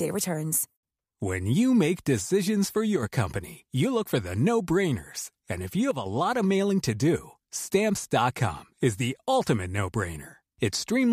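At 2.96 to 3.03 s and again at 5.91 to 6.06 s, the speech abruptly dips by about 6 dB and then snaps back, a brief drop in level. This is likely one channel drops out, leaving only half the shared signal in the mono sum.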